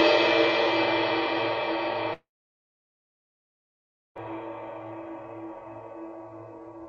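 From 2.13 to 4.17 s, likely a long network dropout: a brief fading buzz, then 1.9 s of silence, shown as a flat waveform gap, before sound resumes.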